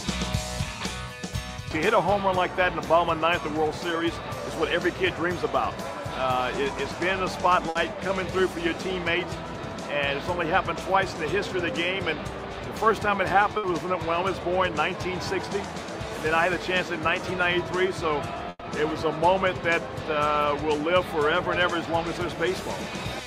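Packets were lost in short runs three times, each a burst of packet loss. The receiver filled each gap by stretching the preceding sound and fading it down. This covers 60 ms at 7.69 to 7.78 s and again at 13.57 to 13.66 s, then 120 ms at 18.49 to 18.64 s, where the concealment fades to about 30 ms of silence. Each time a brief held buzz or hiss replaces the missing audio, which then resumes with that stretch skipped.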